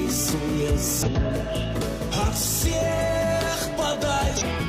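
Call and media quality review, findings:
Damaged data in a compressed stream: brief glitches at 1.03–1.09, 1.77–1.82, 4.37–4.43 and 4.55–4.60 s, each about 50–60 ms. Decoder misreads corrupted frames and resyncs.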